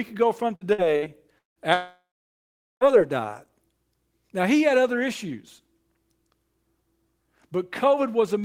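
Repeated packet loss (robotic sound) runs from 0.55 to 1.59 s. The speech breaks up in four gaps, the longest 177 ms, each patched by stretching the last sound. About a third of that span is filled this way, so it comes out choppy.

A long network dropout follows from 1.74 to 2.84 s. About 1.08 s of speech never plays. The last sound smears into a fading buzz before roughly 0.8 s of silence, and the speech resumes with that part gone, likely from audio not arriving over the network.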